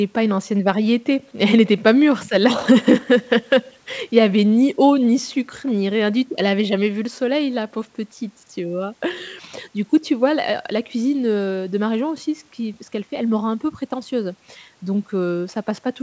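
Nothing stood out on listening to this speech, which has the band-limited sound of a call path with no energy above 8 kHz.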